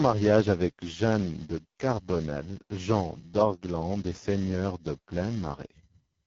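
Speech, carrying AMR wideband (HD Voice) codec damage from start to finish. The voice sounds rough and raspy and nothing is present above 7.7 kHz. Such heavy coding damage fits the lowest 6.6 kbit/s mode, where the pulse-driven vocal tract model runs short of bits.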